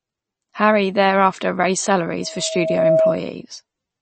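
From start to finish the speech has a dull, watery quality. Nothing comes through above about 8.4 kHz, so s sounds lose their edge, and there's a swirly, metallic smear on the consonants. That's likely MP3 compression at a low bitrate, around 32 kbps judging by how hard the treble is cut. The encoder ran short of bits, chopped off the top end and dropped quieter detail frame by frame.

Right after "thereafter raised", at 2.21 s, a loudspeaker feedback squeal starts. A single tone at 641 Hz swells up over roughly three quarters of a second until it sits about 5 dB above the speech, then stops at 3.24 s. The mic was picking up the loudspeaker it was feeding, and at that one frequency the loop gain went past one, so the tone kept feeding itself and grew into a howl.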